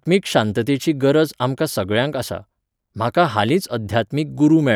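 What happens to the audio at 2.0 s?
Nothing goes wrong at 2.0 s; the speech carries on intact through that moment, with no dropout, click or distortion.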